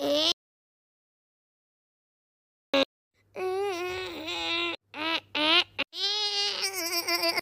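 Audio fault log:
0.32 to 2.74 s, audio dropout to silence: the sound cuts off abruptly just after the start and the signal falls to silence for about 2.4 s, with no room tone or noise floor underneath, then resumes mid-flow as abruptly as it stopped. A silent gap like this, rather than a fade or a quiet passage, points to the input having been lost while recording continued, likely through a disconnected device, a dropped link or a mute, and whatever sounded during those 2.4 s is gone.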